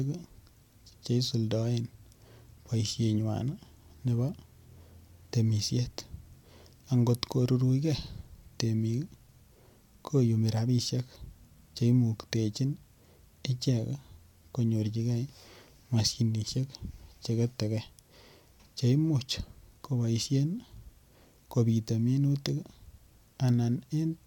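At 16.73 s the speech jumps forward, with no gap of silence. This is most likely a dropped buffer (overrun): roughly 10 ms of samples were overwritten before being read, and the surrounding audio was spliced directly together.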